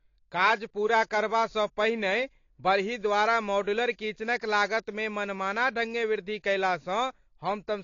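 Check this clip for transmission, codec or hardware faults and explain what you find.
One codec fault runs through the whole recording. AAC compression, present from start to finish: the speech has nothing above 7.1 kHz, and the damage is plainly audible. The likely cause is AAC-LC coding at a low bitrate, around 32 kbps to judge by the sound. The encoder quantises each frame's frequency lines against a hearing model and lowers its cut-off to save bits. That leaves the speech dull and smeared, with a warbling, fizzy edge on sibilants and held sounds.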